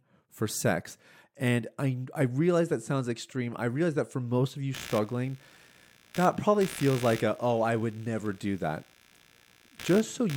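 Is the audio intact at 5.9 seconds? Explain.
No, there's computer activity noise from 4.74 s to the end, where processor or mouse load shifts the shared ground, adding buzzing or chirping at roughly 70 pulses a second, about 20 dB below the speech.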